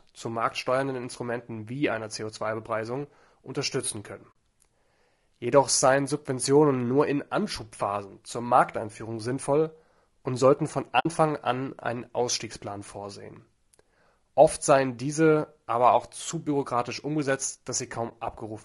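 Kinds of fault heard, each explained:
Low-delay AAC compression: The whole clip sounds rough and grainy, with noise filling the gaps between harmonics and a thin, somewhat synthetic top band. The likely cause is AAC-ELD, the low-delay AAC used in video calls, at a rate that fits about 32 kbps. Its short frames resolve pitch harmonics poorly. That harmonic smearing sets it apart from ordinary low-rate AAC, which sounds swirly but keeps pitch structure cleaner.
AAC frame loss with muting: Decoded audio briefly goes silent where whole frames were lost and replaced with nothing. Overlapping windows fade the sound down and back up, so a single lost frame is a brief dip and a run of lost frames is a soft-edged hole. This distinguishes it from hard dropouts or repeated-audio concealment. Gaps occur at 4.32 s after "unterstützen können" (about 40 ms), 10.99–11.06 s between "sinnvoll und sollten von" and "an einen" (about 60 ms), and 18.09–18.12 s after "auch zu bürokratisch umgesetzt" (about 20 ms).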